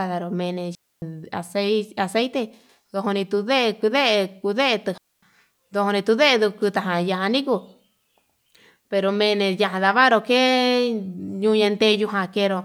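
At 0.75 s and again at 4.98 s the speech drops into a digital wireless dropout: the receiver loses too much data and mutes, leaving clean silent holes of 272 ms and 248 ms with no noise burst.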